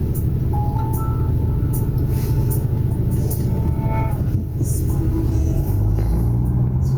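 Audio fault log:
throughout, gain pumping: the input gain was likely set far too high, with a fast limiter clamping it down on each loud sound, so the level swings by around 10 dB. Loud and soft parts end up closer in level, and everything sounds squashed.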